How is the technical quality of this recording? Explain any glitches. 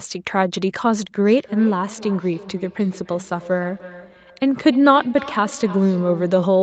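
The recording carries a persistent echo from 1.23 s to the end, and the audio is band-limited with nothing above 8 kHz, as on a call.

Feedback echo between two devices: each phrase returns about a third of a second later, repeating thinner and more ringing, peaking about 17 dB below the speech. A second device in the room replayed the call, this microphone recaptured it, and neither echo canceller removed the other device's playback.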